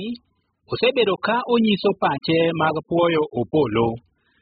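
Throughout, the likely cause is heavy AAC compression at a bitrate pointing to about 8 kbps, which strips everything above 5 kHz and leaves the speech dull and smeared.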